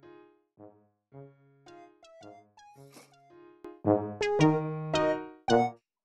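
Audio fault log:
0.0–3.65 s, one channel inverted: the mono sum falls by about 27 dB to a faint residue, likely because one stereo channel's reversed polarity cancels the content shared by both. The waveform shrinks sharply and the spectrogram darkens.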